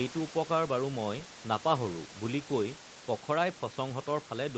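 No technical fault can be heard in the speech, which carries the ordinary coding of a call path with nothing above about 8 kHz and sits roughly 20 dB above a low room noise.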